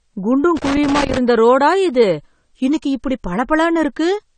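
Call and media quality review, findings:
Dull, smeared speech throughout with plainly audible codec damage and nothing above 9 kHz; likely AAC compression, AAC-LC at a low bitrate near 32 kbps, cut-off lowered and quantisation coarse.

Irregular crackle and scratching from 0.57 to 1.17 s, ending just before "ரோடா இது இன்னைக்கு இப்படி"; loose connector crackle, a worn contact intermittently breaking the signal path.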